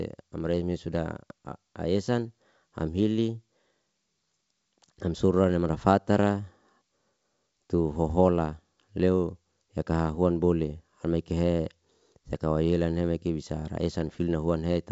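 No technical faults can be heard anywhere in the speech. It carries the band limit of G.722 wideband telephone coding at 64 kbit/s, with nothing above 7.7 kHz and at most a faint trace of the coding itself.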